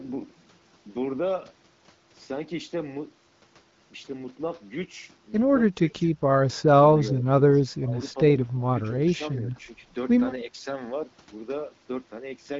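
At 6.53, 7.03, 7.67, 8.47 and 9.18 s the speech ducks in bursts of roughly 0.1 to 0.4 s, from slight to deep. This is likely speech suppressed in double talk. The waveform shows notched envelope dips, and the spectrogram thins.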